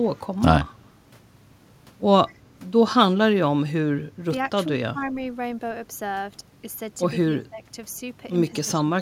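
At 2.28 to 2.34 s a short echo leak appears: a copy of the speech returns about 150 ms late and about 30 dB below it, likely because a loudspeaker-side echo canceller let part of what its microphone picked up pass back into the call. On a spectrogram, a weak copy of the preceding harmonic pattern appears shifted 151 ms later. The waveform shows a small added ripple riding under the direct signal.

Speech suppressed in double talk then appears at 4.68 to 4.76 s, 4.92 to 5.15 s, 7.34 to 7.64 s and 8.51 to 8.87 s. The speech dips by around 5, 10, 15 and 15 dB, affecting roughly 70, 200, 150 and 300 ms. This is likely an echo canceller turning down its own talker along with the loudspeaker echo while both were active. The waveform envelope caves in at those points, and the spectrogram shows energy thinning across the band.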